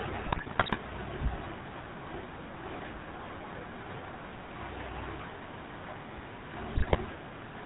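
GSM full-rate codec coding runs through the whole speech clip: the rough, buzzy texture and nothing above 4 kHz fit the old 13 kbps pulse-excited vocal-tract model. GSM bit errors strike from 0.32 to 0.77 s and from 6.76 to 6.96 s, where corrupted filter, pitch and gain values produce squawks, pops and gargling bursts.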